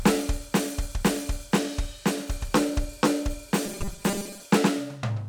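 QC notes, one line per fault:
3.66–4.46 s, robotic sound from repeated short buffers: the music becomes a metallic buzz fixed at 200 Hz, likely from 5 ms chunks repeated for about half the time.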